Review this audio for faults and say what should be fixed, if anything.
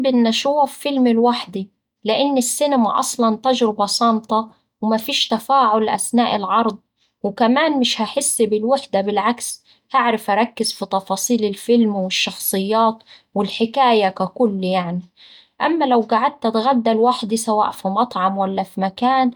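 No faults were heard, so nothing needs fixing.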